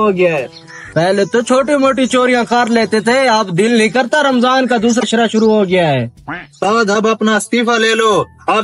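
A short burst of damaged data in the compressed stream at 4.98 to 5.03 s: the decoder misreads corrupted frames and resynchronises, producing a roughly 56 ms glitch in the audio.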